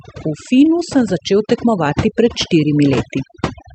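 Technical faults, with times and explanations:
Throughout: overdone noise removal. The background drops and breaks up into twinkling specks, and the speech has its softer parts hollowed out. A noise reduction stage set far too aggressively is pulling individual frequency bands down or off whenever they come close to its estimate of the noise floor. The quiet components of the speech sit near that floor, so they are removed along with the noise. The call path's audio band stops around 8 kHz.
0.92 to 2.06 s: automatic gain rising. Over a little more than a second, the speech and the residual background grow louder together, by about 4 dB in all. The automatic gain control judged the incoming level too low and raised its gain gradually rather than in a step. Because it scales the whole signal, the background specks rise along with the speech.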